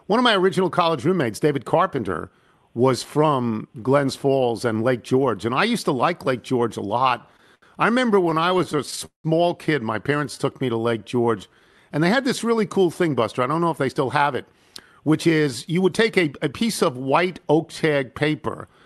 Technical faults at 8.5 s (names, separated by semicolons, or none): repeated stalls (stutter)